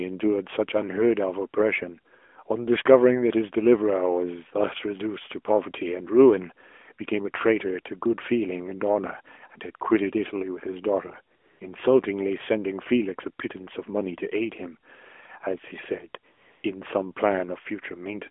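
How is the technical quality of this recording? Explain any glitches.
The recording comes through an AMR narrowband phone link, and it has two AMR comfort noise gaps. From 11.36 to 11.60 s and from 16.32 to 16.64 s, the sender stopped transmitting speech frames for 240 and 320 ms. The receiver then filled each gap with smooth synthetic noise in place of the real background. A spectrogram shows flat, featureless blocks there, and the waveform shows an even noise floor.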